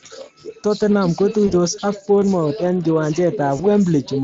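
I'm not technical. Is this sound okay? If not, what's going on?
No. Speex codec damage runs through the whole speech clip. Speex squeezes speech into very little data and rebuilds it from a rough model of the voice, so fine detail is lost. Here the voice sounds plainly processed, noisy and hoarse rather than clean.

VoIP packet loss concealed by the speech codec happens twice, from 1.47 to 1.53 s and from 3.57 to 3.61 s. Each time, one 20 ms chunk of sound went missing in transit. The decoder filled the gap by stretching the last bit it had, which leaves a brief buzzy or smeared patch. The voice stays weak or distorted for a moment as it recovers.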